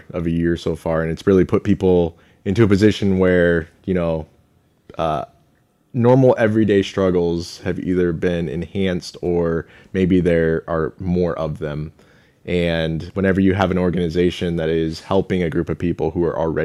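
No technical faults detected.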